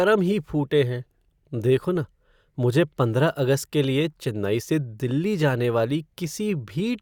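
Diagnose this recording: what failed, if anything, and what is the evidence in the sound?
Nothing in the recording points to a failure at any stage of the chain, from capture to playback, and the speech signal arrives intact with no audible technical defect.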